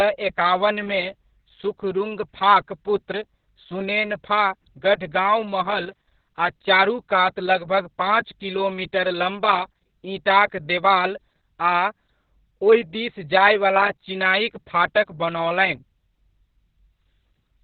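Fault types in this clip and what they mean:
Opus voice compression: a speech codec squeezed to about 6 kbps, unlike plain low-pass filtering, leaves nothing above 4.5 kHz plus hoarse, robotic, coarsely coded texture throughout.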